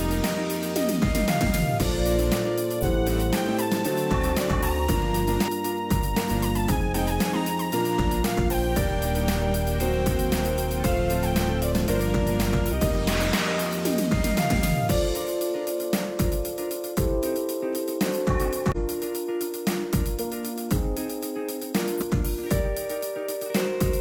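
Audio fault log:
2.79–2.84 s, 5.44–5.50 s, 18.72–18.77 s, 21.97–22.03 s: damaged data in a compressed stream. Corrupted frames break decoder sync, causing short blips of about 50–60 ms while it hunts for the next valid header.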